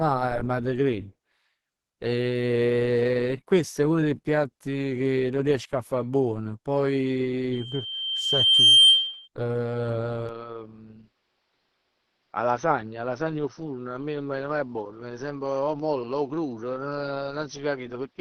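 Throughout, the speech sounds hoarse, grainy and muffled, which points to Opus compression at a low bitrate, likely around 16 kbps in its hybrid speech mode.

From 7.52 to 9.28 s, a loudspeaker feedback squeal appears. A 3.2 kHz tone grows over about a second to roughly 10 dB above the speech as the mic-to-speaker loop exceeds unity gain.

From 10.29 s through to the end, the sound abruptly turns duller and about 5 dB quieter, with nothing above 6.1 kHz and a faint new noise floor. This is likely the input switching to a poorer device, with no gap at the switch.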